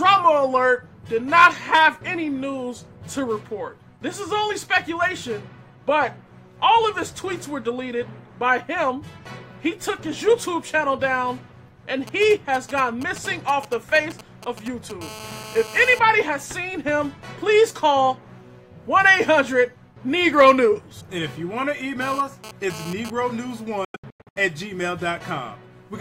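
From 12.07 to 14.92 s a galloping dit-dit-dit of short, raspy buzzes cuts in, around 15 dB below the programme. These are GSM signalling bursts. A nearby 2G phone was exchanging brief groups of radio bursts with the network, as happens before a call or a text arrives. The audio circuit rectified those pulses, so each group comes through as a short buzz at the phone's 217 Hz burst rate.

At 15.01 s the pattern turns into a continuous hard buzz, about 16 dB below the signal, that lasts until 15.99 s. This is GSM phone buzz: once a call was established, the phone transmitted 217 times a second and the circuit demodulated every burst. The result is a 217 Hz tone rich in harmonics and unrelated to the audio. It returns from 22.01 to 23.10 s, again about 16 dB down, but here it comes and goes, which fits a data transfer.

Between 23.85 and 24.37 s the sound breaks up into a series of silent holes. 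Together they remove about 370 ms of audio spread over roughly half a second, and the longest single gap is 92.9 ms. After each hole the sound picks up further along, as though it had kept playing unheard. This is likely a Bluetooth dropout, with several audio packets failing to reach the headphones in time and being discarded.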